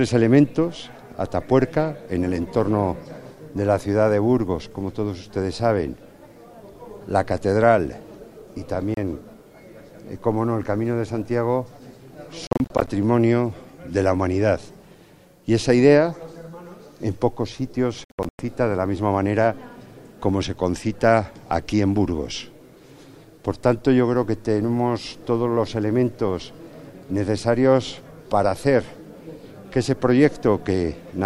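At 8.94 s the sound cuts out for about 30 ms. From 12.47 to 12.88 s and 18.04 to 18.39 s it stutters through clusters of short gaps, the longest about 100 ms. It resumes as if it had kept playing, likely a Bluetooth dropout from late packets.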